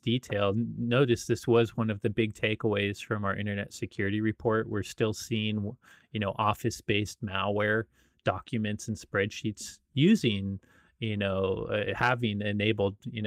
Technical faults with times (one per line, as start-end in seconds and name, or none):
none